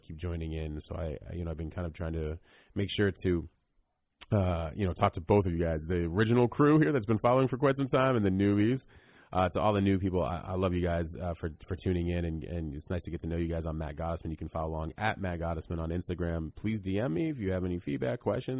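Nothing in the speech recording stood out as a technical fault on listening.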